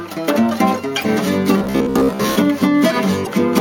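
At 1.01 to 1.05 s and again at 3.23 to 3.27 s, damaged data in a compressed stream makes the decoder misread frames and lose sync until it finds the next header. Each is brief. On a spectrogram it shows as a thin vertical smear, and on the waveform as an abrupt break.

From 1.58 to 2.39 s the sound turns into a rigid metallic buzz near 66.8 Hz, with about half the audio replaced. This is likely robotic sound from repeated short buffers: segments of roughly 15 ms are looped. A spectrogram shows evenly spaced harmonic stripes, and the waveform shows identical repeating cycles.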